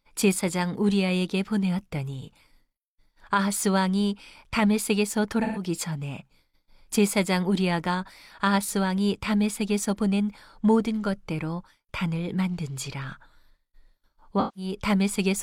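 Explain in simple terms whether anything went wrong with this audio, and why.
AAC frame loss with concealment happened twice. Small chunks of the compressed stream went missing, and the decoder filled each gap by reusing the last good sound. At 5.43 s (about 0.13 s long) and 14.39 s (about 0.17 s), the speech briefly turns smeared and noisy.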